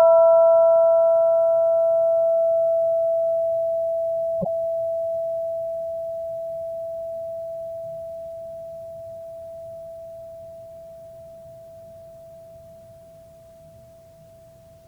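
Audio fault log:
4.41–4.47 s, corrupt frame decoded: flipped bits in what sounds like two damaged frames were decoded anyway, throwing energy to wrong frequencies as a brief burst peaking around -10 dBFS.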